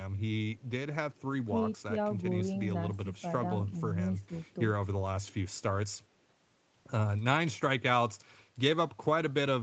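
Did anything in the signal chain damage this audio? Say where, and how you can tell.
Yes. The speech briefly ducks in choppy pieces at 3.04–3.23 s, 3.66–3.78 s and 4.28–4.35 s, falling about 10 dB, about 5 dB and about 10 dB. This is likely speech suppressed in double talk: the call's echo canceller mistook the talker for echo and attenuated it.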